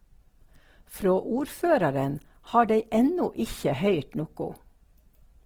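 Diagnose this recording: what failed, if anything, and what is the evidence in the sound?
Codec stage. The speech sounds grainy and rough throughout, yet reaches about 20 kHz. Likely Opus compression: starved bands get noise-filled, fitting a 16 kbps rate.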